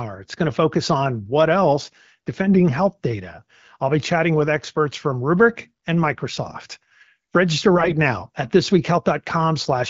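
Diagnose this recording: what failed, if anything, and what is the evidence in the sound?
AMR bit errors in the network stage, from 7.76 to 7.92 s: the speech keeps its pitch and level but turns hoarse and gargly. That fits about 8 frames arriving with a rough tenth of their weakly protected bits flipped. The checksum over the important bits still passed, so the AMR-WB decoder accepted misplaced excitation pulses and wrong fine gain and spectral values.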